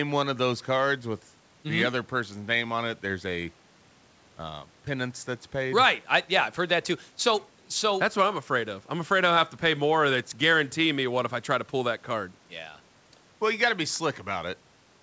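No technical faults occur at any point in the speech, so there is nothing to describe in time order.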